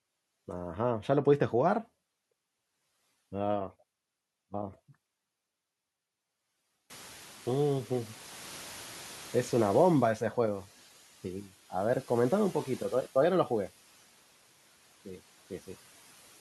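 From 6.9 to 10.21 s the noise suppressor is catching up: the room noise jumps by about 24 dB around 7 s, and the suppressor's noise estimate takes about 3.3 s to follow. The louder noise, roughly 22 dB below the speech, passes through under-reduced at first, then sinks by about 6 dB.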